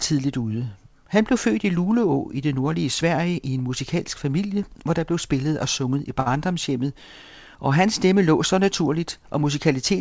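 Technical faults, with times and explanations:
6.20 to 6.28 s, short stall from a late packet: right after "spillet og sunget i", a packet showed up late and the jitter buffer ran dry, so the receiver stretched the last bit of speech for about 61 ms until it arrived. Nothing gets skipped, but that sound hangs on a touch too long with a faint buzzy dip, and everything after it runs about 61 ms later. The sound stops at 8 kHz, which fits G.722 in the call path.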